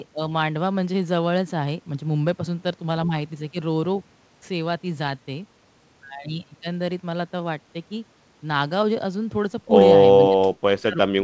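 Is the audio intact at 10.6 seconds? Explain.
No. From 10.16 s to 11.24 s the speech sinks by up to about 40 dB. This is likely speech suppressed in double talk, with the echo canceller turning down both its own talker and the loudspeaker echo, rather than an abrupt packet-loss gap.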